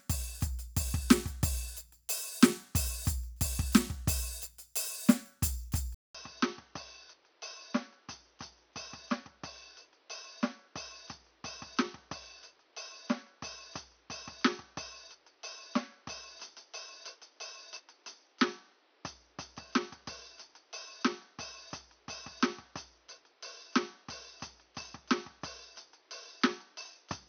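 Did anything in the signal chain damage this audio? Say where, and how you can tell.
Yes. At 5.95 s the music drops out for 200 ms, then returns about 10 dB quieter, with nothing above 6.2 kHz and fresh hiss roughly 30 dB down, until the end. This is likely the input switched to a poorer device at driver level, with a narrower band and its own noise.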